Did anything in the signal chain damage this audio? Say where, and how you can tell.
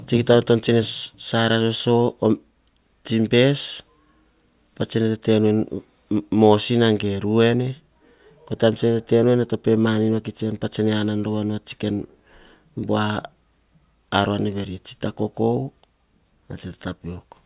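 No, nothing in the signal chain damaged this audio.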